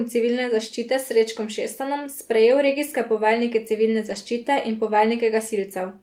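At 4.05 s, running to 4.15 s just before "zaščite in", the speech passes through a lost packet rebuilt from error correction. Roughly 60 ms of audio, consistent with three separate packets dropping out, was replaced by the low-bitrate redundant copies carried in the following packets. The decoder played those copies instead of leaving a gap, so the sound stays continuous, but that stretch comes through rougher and noisier than the surrounding speech.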